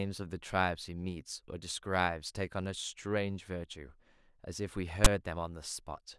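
At about 5.05 s there's a very short, hard-edged burst of static, which is file tags played as audio. A chunk of text metadata got read as if it were sample data, so instead of speech you get a harsh rasp that sits off to one side of the centre line, since text bytes cluster in a narrow range of values. It starts and stops abruptly with no fade at all, so it really jumps out.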